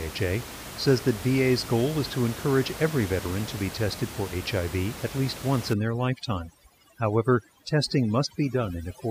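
Overdone noise removal sets in at 5.73 s, right after "at least once", and lasts to the end at 9.11 s. An overly aggressive noise reducer clamps down on frequency bands near its noise estimate, so the room noise, about 13 dB below the speech, collapses into near silence with twinkling specks, and quieter speech components vanish too.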